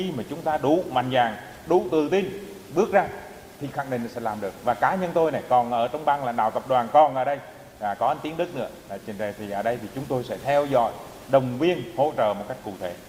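No technical faults can be heard.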